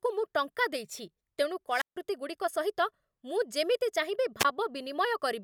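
At 1.70 to 1.97 s and again at 4.39 to 4.45 s, the speech shows a wireless microphone squelch dropout. The FM radio link fades, hiss rises, and the receiver's squelch mutes the output for about 151 ms, then about 17 ms, before the voice returns.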